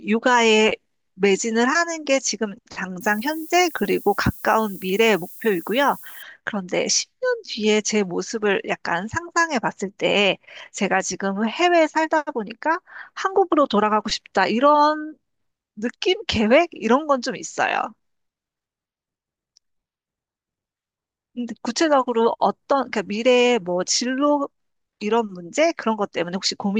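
Speech, with a stretch of low bit depth with noise shaping from 3.01 to 6.22 s. Over that span the audio sounds as if it is carried on only about 7 bits. The rounding error has been shaped upward, so it comes through as a steady, thin hiss that climbs toward the top of the band. It sits roughly 20 dB below the signal and stops at 6.22 s.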